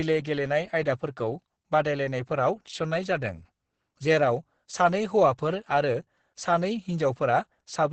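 The speech throughout shows Opus voice compression at heavy damage: nothing above 8.6 kHz, with the SILK linear-prediction coder in wideband mode and coarsely coded excitation, leaving the speech muffled, hoarse and slightly robotic, which fits a bitrate around 10 kbps.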